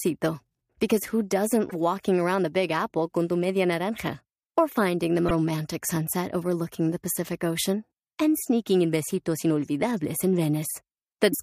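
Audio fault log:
1.69–1.73 s, 5.27–5.31 s and 11.30–11.34 s, damaged data in a compressed stream: each is a brief glitch of about 40 ms. Corrupted bytes in the encoded stream made the decoder misread those frames and lose sync until it found the next valid frame header.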